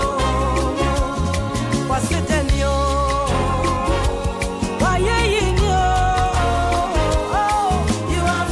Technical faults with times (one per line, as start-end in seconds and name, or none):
none